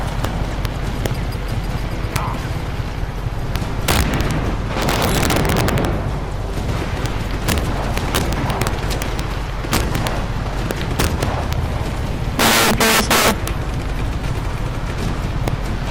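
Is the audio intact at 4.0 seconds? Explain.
No. Integer overflow runs through the whole clip, including 4.0 s. The gain is pushed about 12 dB too hot, and around 2 percent of samples exceed the integer limit. They wrap to the opposite sign instead of being held, producing harsh, violent cracks on loud peaks.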